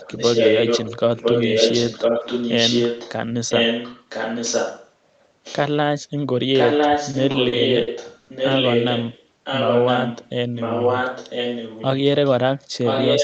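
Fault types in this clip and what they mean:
Echo leak: A loudspeaker on the far end likely fed back into its microphone, and the echo canceller let much of it through and returned it. The result is a second copy of the speech trailing about 1.0 s behind, roughly as loud as the original from the start to 3.13 s, 3.49 to 4.92 s and 6.53 s to the end, and much fainter, about 15 dB down, in a short scrap at 5.44 to 5.61 s.
Repeated stalls (stutter): Packets arrived late enough that the jitter buffer emptied five times between 7.11 and 8.29 s, and each time the receiver stretched the last sound to cover the wait. About 220 ms in total was filled this way, roughly a fifth of that stretch, with the longest hold around 80 ms. Nothing is lost, but the speech drags and stutters through that second.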